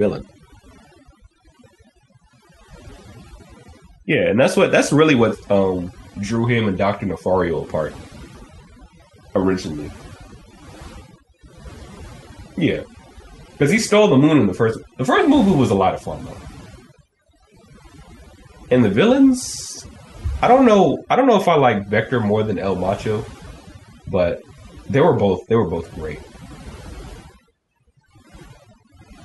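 Right from the start and all the way through, the speech has overdone noise removal: the denoiser was pushed too hard, so it switches off individual frequency bands near its noise estimate. The background drops and breaks up into twinkly specks.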